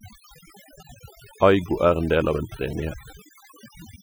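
Noise reduction set too aggressively on this speech recording produces overdone noise removal throughout, gating frequency bands near the noise floor so the background drops and breaks up into twinkling specks.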